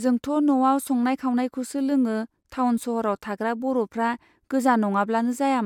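Nothing goes wrong anywhere in this bit of speech, so there's no fault to point to.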